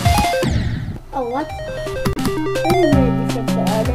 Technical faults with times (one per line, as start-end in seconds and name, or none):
2.13-2.18 damaged data in a compressed stream